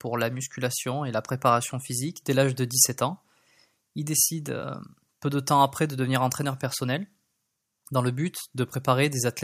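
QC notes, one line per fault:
No technical faults were found in this speech recording; the signal holds steady across its full duration with nothing that calls for attention.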